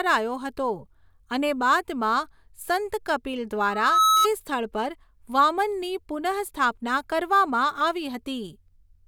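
From 3.69 to 4.28 s, loudspeaker feedback squeal: loop gain tops unity at 1.3 kHz, so a tone swells above the speech, stopping before "સ્થળ પર વામનની".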